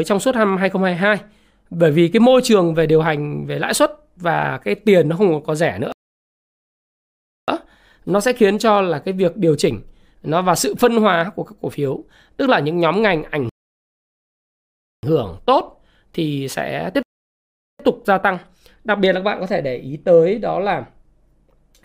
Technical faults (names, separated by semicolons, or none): rebuffering stall